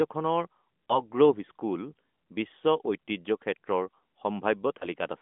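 A brief dip and warble in the speech at 0.86 to 1.03 s, and again at 4.78 to 4.88 s, comes from lost AMR speech frames, each consistent with a single 20 ms frame. The decoder bridged each gap by repeating the previous pitch and vocal tract settings at reduced gain, over the narrowband 200 Hz to 3.5 kHz mobile line.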